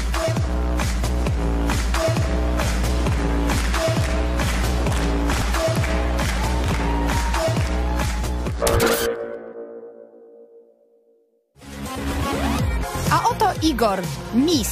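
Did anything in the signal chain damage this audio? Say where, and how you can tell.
Yes. Three brief jumbled moments, at 5.33 to 5.42 s, 6.66 to 6.74 s and 14.21 to 14.29 s, point to chunks out of order at the driver or buffer stage. Each spans about 85 ms, two adjacent blocks of roughly 42.7 ms, played with the later one first. Nothing is missing, but the swap leaves three hard joins per event, heard as a scrambled fragment of sound.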